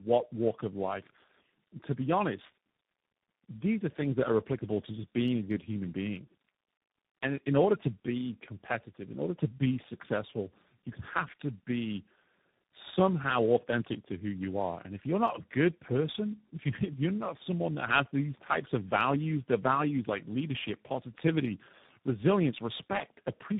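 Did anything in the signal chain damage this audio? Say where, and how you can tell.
Yes: tandem speech coding throughout the speech, at the codec stage. The audio stops near 3.8 kHz and sounds rough, muffled and warbly, which fits three speech codecs in a row, likely G.729A twice then CVSD, each re-coding the previous coder's degraded output.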